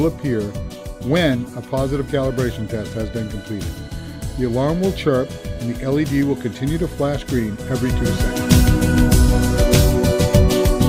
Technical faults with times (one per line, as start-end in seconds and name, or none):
none